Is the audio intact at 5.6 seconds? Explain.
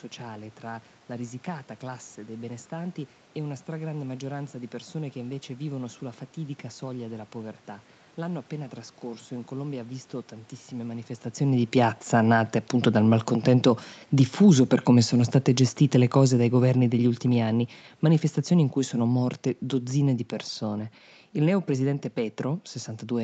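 Yes, the audio is intact at 5.6 seconds, with no fault at that moment.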